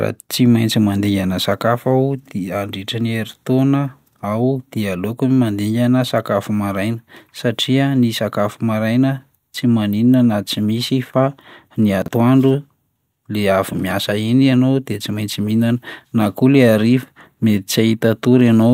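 At 12.02 to 12.08 s there's a spot of chunks out of order: one 20 ms slice of the speech turns up two chunks late, so it plays after the pieces that should follow it. Nothing goes missing, but that brief stretch sounds jumbled, with hard joins where the order breaks.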